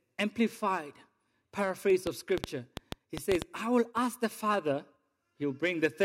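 At 1.90 s a single sharp click marks dropped samples. A fraction of a millisecond has likely gone missing, so the waveform jumps straight to a later value. From 2.07 to 3.43 s comes a train of clicks, about ten at roughly 5.9 per second, irregularly spaced and peaking about 20 dB above the speech. They are likely from interference or a faulty connection. Another dropped-samples click lands at 3.15 s, inside that train. The last falls at 4.54 s, just after "I will ask the".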